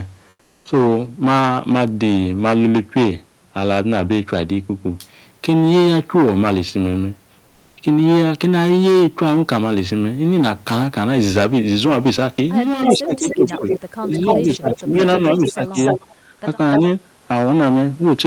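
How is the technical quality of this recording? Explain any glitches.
The recording is speech with a steady room noise about 38 dB below the voice, and it has four kinds of fault, mostly around a stretch of two-way talk between 12.8 and 16.8 s.

Comfort noise replaces the background from 0.29 to 0.65 s (360 ms) and from 7.47 to 7.77 s (300 ms). The likely cause is a discontinuous-transmission scheme, which fits Opus DTX, filling pauses with synthetic noise. The real room sound becomes a flat, featureless hiss, about 8 dB quieter in the first gap and about 2 dB louder in the second.

An echo leak appears from 12.84 to 14.82 s, from 15.33 to 16.15 s, and briefly from 16.73 to 16.79 s. A copy of the far-end voice returns about 294 ms late, around 5 dB below the speech, likely because a loudspeaker's echo canceller failed to remove everything its microphone captured.

Speech is suppressed in double talk from 12.94 to 13.66 s, from 14.06 to 14.99 s, and from 15.38 to 15.78 s. 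While both sides talk, the echo canceller likely cannot separate the local talker from the loudspeaker echo and turns the signal down. The voice dips by up to about 20 dB, in pieces totalling roughly 0.3 to 0.7 s per stretch.

The background is gated by the echo canceller from 16.15 to 16.32 s, just as the second echo stretch ends. The microphone is pulled down hard while the loudspeaker plays, so the room noise drops by about 12 dB for roughly 150 ms and then returns.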